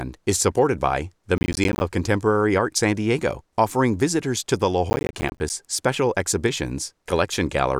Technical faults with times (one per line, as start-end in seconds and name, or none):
1.38-1.81 processor overload crackle
4.90-5.50 processor overload crackle